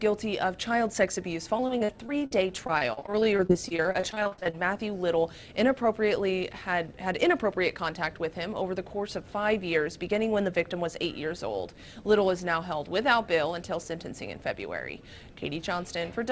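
From 1.57 s to 4.58 s the stream suffers repeated packet loss, which gives a robotic sound. Packets go missing or arrive too late again and again, and each hole is bridged by extending the sound that came just before it. Dozens of short gaps follow one another, the longest about 44 ms, and roughly a quarter of the stretch is concealment rather than real audio. The result is choppy, with fragments of the sound dropped.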